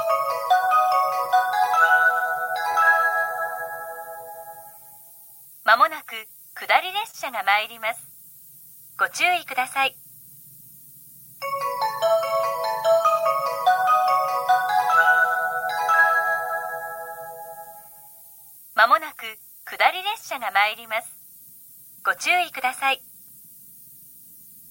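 Throughout the clip there is low bit depth with noise shaping: a steady, thin hiss, brightest toward the top of the band and sitting only around 20 dB below the signal, which fits an 8-bit signal whose rounding error has been pushed up in frequency.

From 2.71 to 2.76 s there is a short concealed packet loss. About 20 ms of audio never arrived, and the receiver bridged it with 24 ms extrapolated from the preceding sound before blending back, leaving a brief smear or wobble where material is genuinely missing.

From 7.11 to 7.16 s a short stall from a late packet occurs. The jitter buffer ran dry, so the receiver held the last sound for 26 ms until the packet came, then resumed where it left off. Nothing is lost, but the sound hangs slightly with a slight buzz or dip.

From 15.23 to 15.81 s a jitter buffer speed-up trims excess buffered delay by cutting short pitch-period segments repeatedly, removing about 40 ms in total. 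Playback runs at 105% speed with unchanged pitch, so this stretch sounds slightly hurried.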